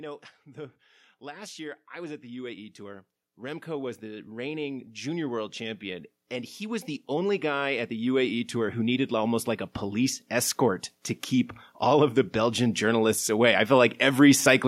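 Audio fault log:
1.19–10.62 s, automatic gain rising: the gain control judged the input too quiet and raised its gain by about 17 dB, so voice and background swell together.
11.65–14.63 s, automatic gain rising: a second, smaller climb of about 5 dB lifts the speech and the background together toward the end.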